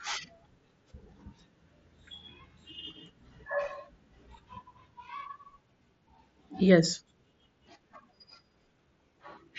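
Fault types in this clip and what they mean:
Nothing stood out on listening to this speech clip.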